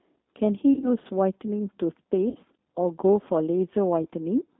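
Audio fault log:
Throughout: G.729 codec damage, plainly audible. The speech is rebuilt at 8 kbit/s from a vocal tract filter, a pitch predictor and a few pulses per 5 ms subframe, in the G.729A form. The line passes only about 250 Hz to 3.6 kHz. So the voice sounds narrow and boxy, with no air above the band. Its texture is slightly rough and synthetic. Pitch and vowel shapes come through, but fine detail does not.
0.74 to 0.89 s, 2.29 to 2.36 s and 4.03 to 4.06 s: VoIP packet loss concealed by the speech codec. In the first gap 50 ms of frames went missing, scattered over 80 ms, with the longest run 30 ms. In the second, 60 ms were lost. In the third, 20 ms were lost. At each gap the decoder repeats its last pitch and filter at falling gain. The voice smears into a fading buzzy tone or coloured noise. It stays weak and distorted briefly after packets return.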